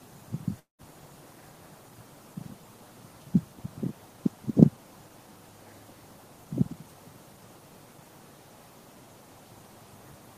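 From 0.59 to 0.82 s the audio drops out: the last sound carries on as a buzzy, fading smear, then about 140 ms of near-silence, before the signal resumes with roughly 200 ms of material simply gone. This is likely a long network dropout, with the receiver filling the gap by stretching what it last had. On a spectrogram, the prior partials extend as repetitive, decaying bands into a dark gap. The waveform shows a shrinking envelope collapsing to a flat line.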